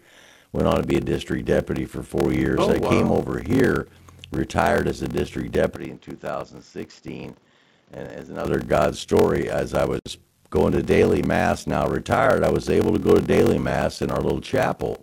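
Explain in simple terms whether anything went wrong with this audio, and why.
Yes, three things went wrong.

Block size mismatch (padded): throughout the clip, one stage in the chain hands over shorter chunks of audio than the next stage expects, and the missing part of each chunk is filled with silence. That tiny gap repeats about 43 times a second, so the speech carries a steady low buzz. It also plays slower than normal, at about 0.86 times its proper speed, yet the voice keeps its basic character. This fits a 1024-sample read.

Input switched to a poorer device: right after "retired as a district", from 5.76 s to about 8.45 s, the recording was most likely switched to a lower-quality microphone or headset. Less of the high end gets through during that stretch, so the speech turns duller and boxier. It also drops to a noticeably quieter level, with a faint new background noise underneath. 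The change happens instantly, with no silence at the switch.

Gap at a join of encoded pieces: the recording was compressed in separate pieces that were then glued together without trimming their edges. Each piece keeps a little silence at its start and end. At 9.99 s, between "story as I" and "going to daily mass", this opens a hole of about 56 milliseconds. The speech cuts out and then carries on exactly where it stopped.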